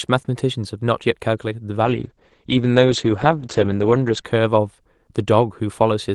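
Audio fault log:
1.84–4.31 s, call bitrate drop: the speech turns rough and muffled, its top end closing in from 12 kHz to 8 kHz and staying there for about 2.4 s before clearing. The call's bandwidth estimate fell, and the Opus encoder was told to spend far fewer bits, consistent with a slide from 32 kbps to about 9 kbps. It then coded the speech more coarsely and dropped the upper band until the rate came back.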